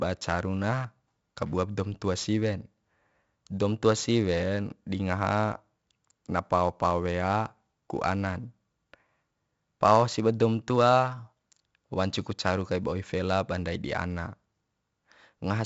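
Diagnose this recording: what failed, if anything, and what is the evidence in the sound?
The failure is at the codec stage: 4-bit ADPCM compression runs through the whole speech clip. Each louder passage carries a gritty hiss that rises and falls with the level, and consonant onsets sound roughened where the adaptive step size lags the signal. The damage is heavy. Nothing is present above 7.7 kHz, which, with a rate of 64 kbps, fits 4-bit samples at a 16 kHz sample rate and accounts for the dull top end.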